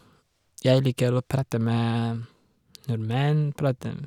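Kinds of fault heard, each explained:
No technical fault can be heard anywhere in this speech recording.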